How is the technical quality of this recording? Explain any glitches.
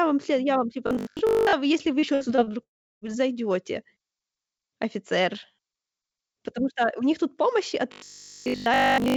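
The recording is damaged by several audible glitches, clustered early on and again at the end, all heard through a G.722-style wideband call path that leaves nothing above 8 kHz.

Robotic sound from repeated short buffers, 0.87 to 1.53 s (after "вам след я вам", before "вы если вы") and 7.92 to 9.16 s (after "них тут помощи от"): the likely cause is audio arriving too seldom, so playback loops a tiny slice instead. A 50 Hz buzz fits 20 ms repeats, covering most of the first span and essentially all of the final one, leaving a rigid metallic drone that only loosely tracks the speech.

Repeated packet loss (robotic sound), 2.00 to 2.53 s, right after "вы если вы": packets went missing several times in quick succession, and each hole, the longest 60 ms, was patched by extending the preceding sound. About 28% of the stretch is concealed this way, so it sounds choppy, with fragments gone.

Long network dropout, 2.63 to 3.04 s: this is likely a stall in the incoming stream. 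The receiver briefly stretches the last sound into a fading buzz, then roughly a third of a second of silence follows, and the audio resumes with that portion simply lost.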